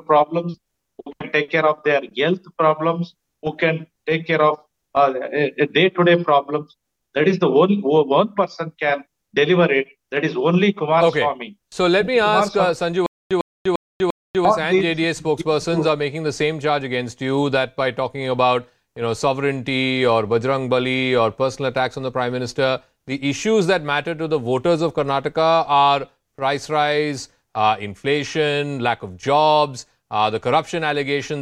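At 13.06 s the audio catches on a short fragment of about 102 ms and repeats it four times at a steady pace, each repeat followed by roughly 245 ms of dead digital silence, so the burst returns every 347 ms until 14.45 s. This stutter with silent gaps likely comes from the player or stream stalling: on each retry it replayed the last buffered fragment and then ran dry, and whatever audio belonged in that stretch is gone.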